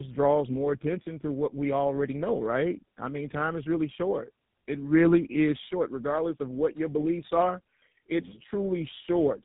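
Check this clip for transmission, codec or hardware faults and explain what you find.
One fault runs through the whole clip: tandem speech coding. The sound fits a G.729A leg, then G.711, then GSM full rate, so the second speech coder re-encodes the first one's errors. Nothing above 3.8 kHz survives. The speech turns rougher and more warbly than a single coder leaves it, and that stacked roughness, not just the narrow band, marks it as tandem coding.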